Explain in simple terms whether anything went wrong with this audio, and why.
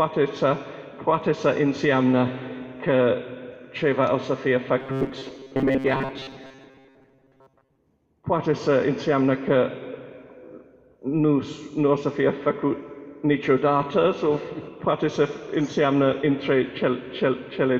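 Between 4.80 and 7.79 s the sound turns into a stiff metallic buzz: robotic sound from repeated short buffers, likely tiny snippets replayed while real audio arrived late.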